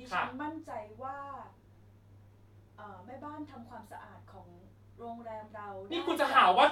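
A speech recording, with nothing technically wrong with it.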